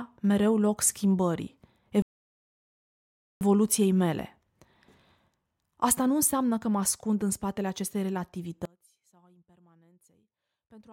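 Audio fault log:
2.02–3.41 s, rebuffering stall: right after "mereu loc schimbării" the speech just stops dead and sits in silence for about 1.39 s, then picks up at exactly the syllable where it left off. Nothing's missing; the player simply ran dry of downloaded audio and waited for more to arrive before carrying on. That's why it feels like a frozen pause rather than a cut: the timeline just gets stretched by that extra second and a bit.
8.65 s to the end, audio dropout to a faint residue: the speech drops away abruptly mid-flow and never comes back before the clip ends. What's left in the gap isn't true silence but a faint sound, roughly 30 dB below normal level, so you can just about sense something still there. The hard edge rules out a fade or a natural pause. The likely cause is the wanted signal being lost upstream while the path after the break stayed live and kept passing that faint residue through.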